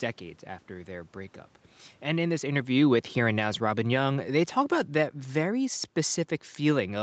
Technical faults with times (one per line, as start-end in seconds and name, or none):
2.05-5.92 automatic gain falling